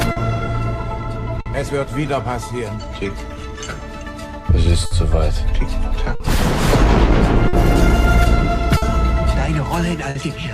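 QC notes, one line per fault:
Throughout: clock drift between sender and receiver. The sending clock runs roughly 4 percent slow against the receiver, so the jitter buffer keeps draining and has to be topped up. The result is a steady thread of small timing hiccups rather than one event. On a waveform the envelope shows recurring slight stretches. On a spectrogram, short horizontal smears of held spectrum keep breaking the normal flow of the sound.
0.11–0.19 s, 1.41–1.49 s, 4.86–4.94 s, 6.15–6.23 s, 7.48–7.56 s, 8.77–8.85 s, 10.10–10.18 s: short stall from a late packet, repeated. Each time the buffer runs dry, the receiver holds the last sound for about 50 ms, then resumes where it left off, so nothing is lost. Playback falls a further 50 ms behind each time. The held segment sounds like a brief buzzy sustain or dip. A spectrogram shows a flat, frozen band. The waveform shows a repeated-cycle plateau.
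1.38–4.29 s: repeated timing corrections. Across this stretch the receiver plays at about 97 percent speed, repeating small slices to make up for the slow sender. In total this adds about a tenth of a second. The edits all lengthen the audio but are unevenly spaced. A waveform shows tiny duplicated cycles at irregular points. A spectrogram shows slightly stretched, discontinuous frames.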